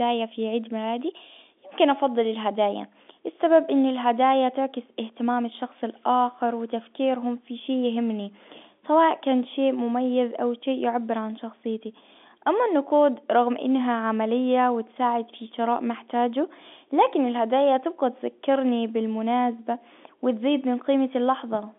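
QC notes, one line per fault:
No faults are heard anywhere in this speech clip. The G.711 telephone coding sounds as a telephone line should, with a band of roughly 200 Hz to 3.5 kHz and nothing heard above 3.8 kHz.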